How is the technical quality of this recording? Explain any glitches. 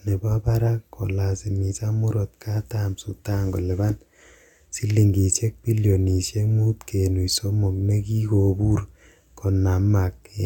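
No technical faults can be heard anywhere in the recording, so there are no glitches to explain.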